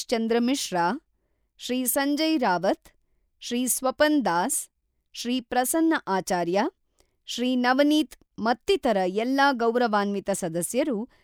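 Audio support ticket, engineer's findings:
No audible faults found in the speech recording; nothing to trace to any component.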